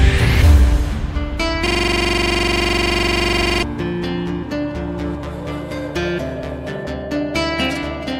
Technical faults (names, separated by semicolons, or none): system hang loop